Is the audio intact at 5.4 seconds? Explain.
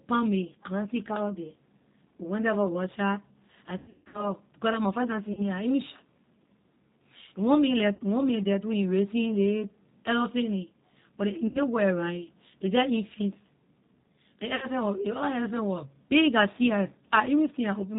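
No. From 5.33 to 5.49 s there is VoIP packet loss concealed by the speech codec. About 40 ms of audio went missing, which fits two 20 ms packets. The decoder extended its last pitch and filter state at falling gain, so the speech smears into a buzzy tone or coloured noise that fades, and stays weak briefly as later frames rebuild.

Around this moment, as across the whole clip, the G.729 codec is plainly audible. The sound points to an 8 kbit/s G.729A stream, which models speech with a vocal tract filter, a pitch predictor and sparse pulses. Nothing above 4 kHz comes through, leaving the speech band-limited, slightly rough and synthetic.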